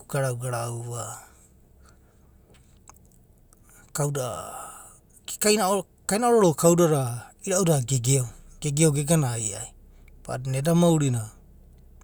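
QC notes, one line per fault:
No faults were heard in the speech. Nothing in it calls for a QC note.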